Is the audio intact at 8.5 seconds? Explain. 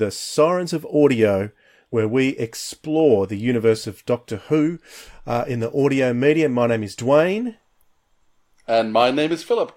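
Yes, at 8.5 seconds the speech plays through intact, with no dropout, click, distortion or other fault at that moment.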